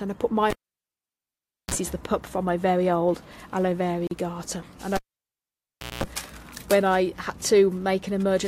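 Cable pulled and plugged in, 0.50 to 1.74 s: a live lead comes out with a pop, the sound drops to near silence for about 1.19 s, then a 37 ms burst of 60 Hz mains buzz sounds as only the plug tip makes contact, and a second pop marks the signal's return.

Gap at a join of encoded pieces, 4.07 to 4.11 s: separately encoded sections were spliced without trimming each one's start-up delay and final-frame padding, so a 41 ms gap cuts into the continuous sound, its edges smeared by the codec, before the sound resumes where it left off.

Cable pulled and plugged in again, 4.96 to 6.04 s: the same pop and near silence, this time for about 1.03 s, with a longer 197 ms stretch of 60 Hz buzz before the reconnecting pop.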